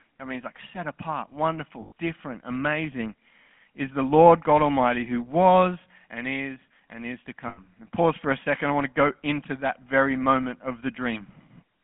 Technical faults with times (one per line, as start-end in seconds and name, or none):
0.00-11.84 GSM full-rate codec
1.82-1.92 lost GSM frames
7.48-7.60 lost GSM frames